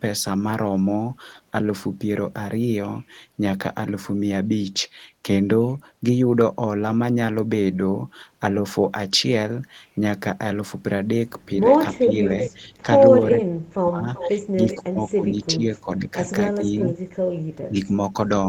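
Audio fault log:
11.68–12.87 s, 13.32–16.74 s, 17.61–18.17 s, speech suppressed in double talk: with both ends talking at once, the echo canceller likely treated this talker as loudspeaker echo and turned it down, so the speech dips in pieces, about 10 dB in the outer spans and about 35 dB across roughly two seconds in the middle one.
12.07–12.14 s, 12.47–12.52 s, 14.15–14.31 s, 14.71–14.76 s, 16.62–16.87 s, echo leak: the far end's canceller likely failed to remove all of its loudspeaker pickup and sent it back, so short scraps of the speech return about 0.38 s late, between about 5 and 25 dB below the original.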